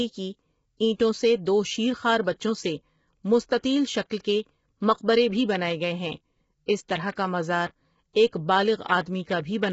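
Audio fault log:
throughout: low-delay AAC compression, speech sounds rough and grainy with noise between harmonics and nothing above 7.7 kHz, likely AAC-ELD at a low bitrate near 16 kbps.
4.10 s, 6.66 to 6.68 s: pre-echo, a brief hiss of 13 ms after "خوار بچوں سے مستطیل" and 25 ms before "اس طرح کا مزار", where block-spread quantisation noise precedes a sharp attack and smears it.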